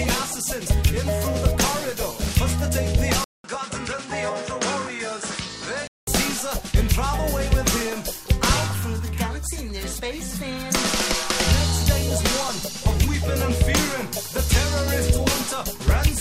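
After a 200 ms gap at 3.24 s, the sound gets quieter, loses everything above 10.1 kHz and picks up faint new noise until 6.07 s, likely an input switched to a poorer device.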